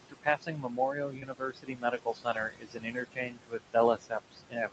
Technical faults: noise suppressor artifacts; speech cut by the noise suppressor; short concealed packet loss

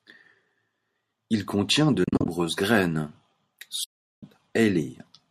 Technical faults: AAC frame loss with muting

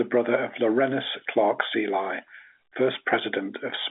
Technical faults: none

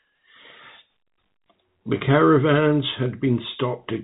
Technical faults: none

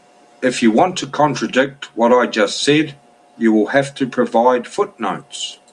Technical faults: none

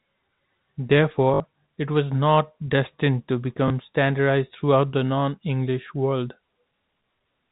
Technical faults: packet loss with last packet repeated

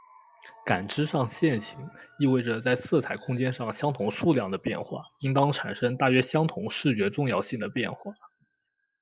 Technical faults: none

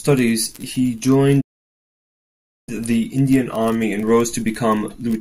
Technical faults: playback stall

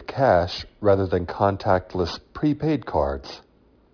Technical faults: aliasing

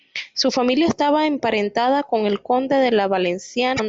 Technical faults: damaged data in a compressed stream

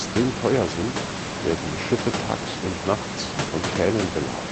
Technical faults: none

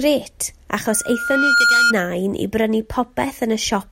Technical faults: loudspeaker feedback squeal

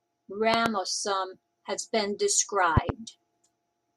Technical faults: loud pop

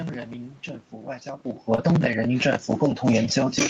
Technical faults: automatic gain falling; short concealed packet loss

